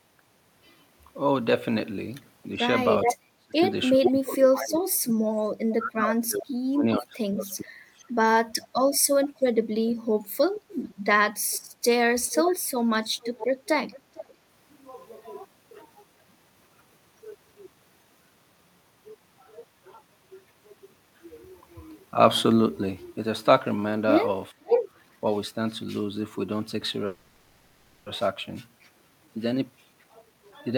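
From 2.56 to 8.1 s the speech keeps sinking, at its worst by about 35 dB, for roughly four seconds in total. That's speech suppressed in double talk: with both ends talking at once, the echo canceller likely couldn't tell its own talker from loudspeaker echo and turned everything down. A shorter, shallower dip of about 20 dB comes between 9.77 and 10.76 s.

Echo leak turns up at 3.03, 4.03, 9.02, from 10.54 to 14.3, and at 24.65 s. It's a delayed copy of the voice, lagging by about 420 to 480 ms, likely from a speakerphone whose canceller let some pickup through. The short bursts at 3.03, 4.03 and 24.65 s are about as loud as the speech itself. The 9.02 s scrap sits roughly 20 dB down, and the long stretch around 10 dB down.

Between 24.53 and 24.64 s the room sound ducks by about 13 dB. That's background gated by the echo canceller, which clamped the mic while the loudspeaker played and then released it.

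From 27.06 to 28.07 s there's a call audio freeze. Packets were likely held up in transit and the jitter buffer drained, so the last sound gets stretched into a fading buzz for about a second. Nothing is lost, but the call is now a second further behind.

From 29.11 s to the end, a jitter buffer speed-up kicks in. The receiver trims out short pitch-period slices, about 0.3 s in all, so the speech runs at roughly 119% speed. It sounds hurried, but the pitch doesn't change.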